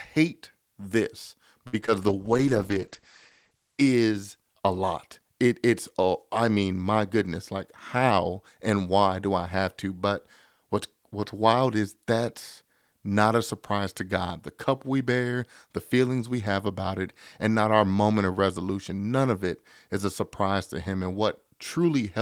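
The clip is speech, and its faults are all network and receiver side. At 1.67 to 1.75 s there is a short stall from a late packet: a packet missed its playout time, the jitter buffer ran dry, and the receiver held the last sound for about 56 ms before resuming exactly where it left off. Nothing is lost, but that sound is drawn out with a faint buzzy dip, and playout runs about 56 ms later afterwards. Right after it come two instances of short concealed packet loss, at 1.81 to 1.84 s and 1.86 to 1.89 s. Each time roughly 20 ms of audio never reached the decoder in time, and the gap was filled by extending the preceding sound before crossfading back into real audio. The result is a quick smear or wobble, and a brief consonant there can disappear. From 2.08 to 4.59 s there is a call bitrate drop: the bandwidth estimate collapsed and the encoder was pushed from 32 kbps down to 10 kbps, bottoming out for about 1.2 s. 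At that rate Opus codes coarsely and narrows its audio band from 20 kHz to 8 kHz, so the sound becomes muffled, rough and watery until the rate climbs back. Finally, at 7.96 to 8.25 s, a jitter buffer speed-up occurs. The buffer had built up more delay than its target, so the receiver repeatedly cut out short pitch-period-sized slices, removing around 50 ms in total. Playback runs at about 113% speed with unchanged pitch, giving a hurried, compressed stretch of speech.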